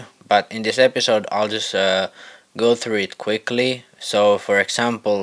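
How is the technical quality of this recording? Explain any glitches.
No technical glitches can be heard in this recording. There is nothing in the audio that calls for an explanation.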